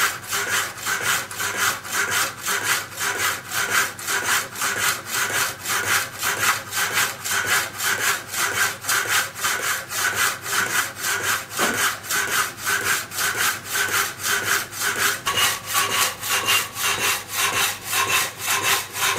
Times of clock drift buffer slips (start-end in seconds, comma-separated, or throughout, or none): none